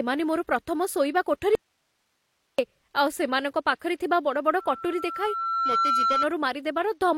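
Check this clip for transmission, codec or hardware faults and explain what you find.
Two faults are audible in this speech clip: a dropout that leaves only hiss, and a loudspeaker feedback squeal.

Audio dropout to a faint residue, from 1.55 to 2.59 s, right after "ଶୋଇବା କୋଠରି". The likely cause is a break in the wanted signal while the path after it stayed live. The speech cuts off abruptly for about 1.03 s, and the gap holds only hiss, roughly 50 dB below the speech. The sound then snaps back mid-flow rather than fading in.

Loudspeaker feedback squeal, from 4.59 to 6.26 s. A microphone is picking up the loudspeaker it feeds, and at 1.4 kHz the loop gain exceeds one, so that frequency reinforces itself each time around. A single steady tone swells over about a second until it sits at roughly the same level as the speech, then holds there until 6.26 s.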